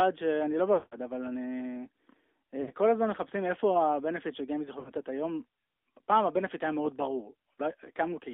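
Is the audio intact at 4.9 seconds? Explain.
No, 4.9 seconds falls right inside a burst of lost AMR speech frames, running from about 4.80 to 4.92 s. Radio errors wrecked a short run of frames, and the decoder papered over them by reusing the last good pitch and vocal-tract settings at a dropping gain. The missing stretch fits about three 20 ms frames, so you hear the sound smear out and sag for a moment before it recovers, a little rough.

All of that sits on top of the AMR narrowband mobile codec that runs through the whole clip. Speech is squeezed into a phone band of roughly 250 Hz to 3.6 kHz, with nothing above that getting through. The pulse-driven vocal-tract model leaves a plainly audible buzzy, synthetic edge, which fits a mid rate like 10.2 kbps.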